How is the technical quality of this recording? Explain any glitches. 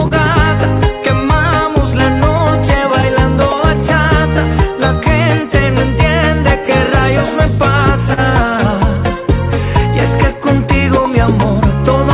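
The recording has timing faults from clock drift, with two brief stalls and two stretches of repeated timing corrections; the G.711 mu-law call path leaves nothing above 4 kHz.

Clock drift between sender and receiver runs throughout. The sender's clock runs about 2% slow, so the receiver's jitter buffer keeps draining and it must pad the audio.

Short stalls from a late packet occur at 0.08 to 0.13 s and 8.14 to 8.19 s. The buffer ran empty and the last sound was held for 27 ms and then 36 ms, with nothing lost.

Repeated timing corrections occur from 1.25 to 6.56 s and from 9.18 to 11.77 s. Small repeated pieces slow playback to 98%, adding roughly a tenth of a second and then about half that, heard as hiccups or an unsteady tempo.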